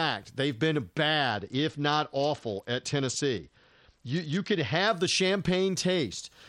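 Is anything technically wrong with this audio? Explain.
Yes. A Bluetooth SBC bit pool drop runs from 1.31 to 4.88 s, just after "they've been." The squeezed allocation, consistent with the bit pool falling from 31 to 9 (about 72 kbps), starves the upper sub-bands, dulling the treble and adding gritty noise.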